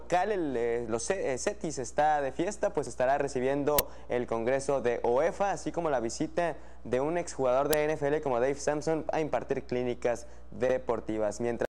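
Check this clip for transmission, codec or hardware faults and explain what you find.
Two faults of the same kind turn up. Uninitialised buffer, at 3.79 s and 7.73 s: a block was sent to playback before any audio had been written into it, so whatever stale values sat in that memory came out as samples. The result is a sudden, loud crack, lasting 10 ms at the first point and 5 ms at the second.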